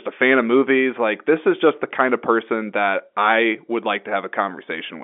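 No technical faults can be heard anywhere in this speech. The G.711 telephone coding is audible as a narrow line band running from about 250 Hz up to about 3.5 kHz, with nothing above it.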